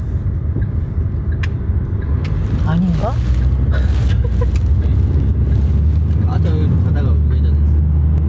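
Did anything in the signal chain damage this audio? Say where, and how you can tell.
Yes. Throughout the clip, the gain ducks by about 5 dB under each loud sound. Loud and soft parts sit squashed together. This is gain pumping, likely from input gain set far too high, with a fast limiter clamping every peak.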